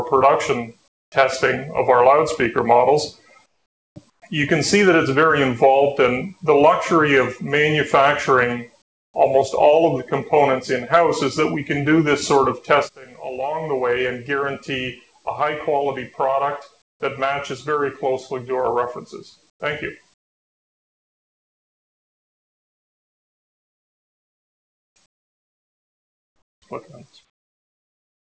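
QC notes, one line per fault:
0.88–1.12, 3.46–4.22, 8.82–9.14, 16.82–17.00, 19.50–19.60, 20.14–26.62 and 27.30 s to the end: comfort noise in place of the background. In each pause the real room tone gives way to a flat, featureless hiss. Where it's measurable, that hiss is about 20 to 24 dB quieter than the background it replaces. The longest stretch runs about 6.5 s. This is likely discontinuous transmission: the sender goes quiet in the gaps, and the receiver pads them with synthetic noise. That noise is band-limited, like everything else in the clip, with nothing above 8 kHz.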